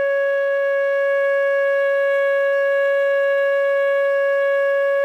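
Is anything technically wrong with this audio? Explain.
No, no technical faults here.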